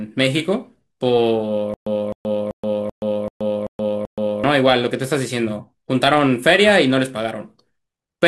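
A stalled stream or player likely caused the stutter with silent gaps from 1.74 to 4.44 s. The same 259 ms burst of speech repeats seven times, each followed by 126 ms of digital silence, at a steady 385 ms period. The speech that should have filled that stretch is lost.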